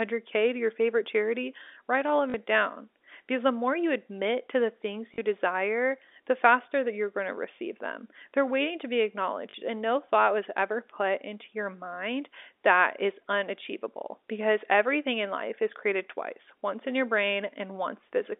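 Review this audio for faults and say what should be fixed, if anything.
Short robotic stutters at 2.30, 5.14 and 9.50 s, each 40 ms, are packet loss with last packet repeated. The receiver replays the previous packet, which fits two lost 20 ms packets and gives a 50 Hz buzz. Adding jitter buffering and proper loss concealment would prevent this. The G.711 telephone band, roughly 250 Hz to 3.6 kHz, is working normally.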